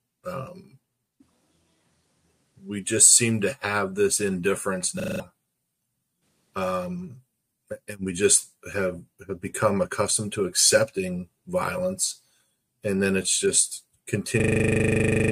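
A system hang loop freezes the audio twice, for 0.2 s at 5.0 s and from 14.4 s to the end. Each time a single 40 ms slice repeats at 25 Hz, giving a buzz, which fits a stalled driver while the hardware kept replaying its ring buffer. The waveform shows identical copies tiled end to end, and the spectrogram shows evenly spaced vertical stripes.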